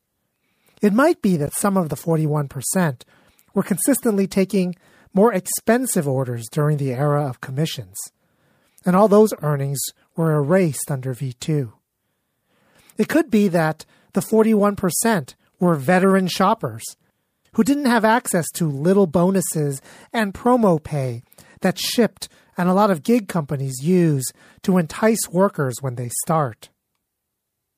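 Corrupt frame decoded at 1.47–1.51 s (between "might be" and "some of the"), 13.14 s (before "be that the"), 16.03 s and 17.66–17.68 s (after "shoppers who"). Each time, damaged compressed frames were played anyway, so misread gains scattered energy across wrong frequencies, producing brief, fairly loud chirps and noise blips.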